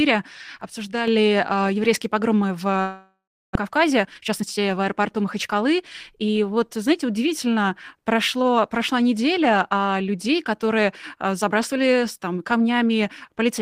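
From 0.61 to 1.08 s, just before "э еврейские погромы в", the speech abruptly drops by about 6 dB and snaps back at the end, with no gradual ramp as a fade or gain ride would have. The likely cause is one channel dropping out, which halves what both channels shared in the mono sum.

From 2.81 to 3.57 s, right after "э еврейские погромы в", the last sound is stretched into a fading buzz, then about 340 ms of silence follows, and roughly 400 ms of speech never returns. Unlike brief packet-loss concealment, this is a long network dropout, and the gap is likely too long for the receiver to cover.

From 3.67 to 6.23 s, before "вот знаете удивительно прошло", the speech runs at 112% speed and sounds hurried, yet the pitch is unchanged, which sets it apart from resampling. This is a jitter buffer speed-up: short pitch-period pieces are cut repeatedly, removing about 0.3 s of backlog left after the dropout.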